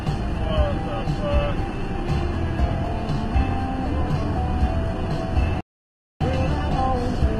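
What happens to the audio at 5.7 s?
At 5.7 s the sound is inside a playback stall that runs from 5.61 to 6.21 s: output halts mid-flow for about 0.6 s, likely because the player ran short of data, then resumes. A waveform shows a flat gap, a spectrogram a blank vertical band.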